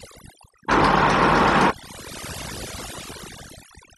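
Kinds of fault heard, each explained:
overdone noise removal: Noise reduction was applied far too strongly to this speech. Frequency bands close to the estimated noise level are pushed down or switched off, taking quiet parts of the voice too. Throughout the clip the background drops and breaks up into twinkling specks.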